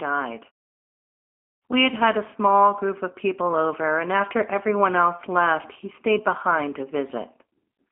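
From start to finish the speech carries the signature of the G.729 codec. The codec rebuilds each short frame from a vocal tract model, a pitch predictor and a handful of pulses rather than preserving the waveform, which fits an 8 kbit/s stream. The damage is plainly audible as a rough, synthetic edge on the voice. Nothing above 3.5 kHz survives, and the band sits roughly between 250 Hz and 3.4 kHz, giving a thin telephone sound. The pauses fall silent cleanly.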